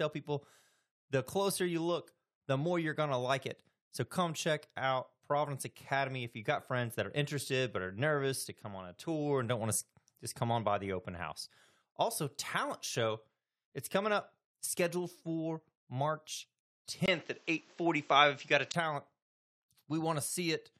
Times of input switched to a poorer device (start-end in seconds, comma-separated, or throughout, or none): 17.06-18.74